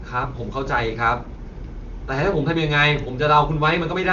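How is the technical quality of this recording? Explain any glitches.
No glitches to report here: the speech comes across as typical HD Voice phone audio, topping out around 7.4 kHz the way a wideband call does, and nothing in it jumps out as a problem.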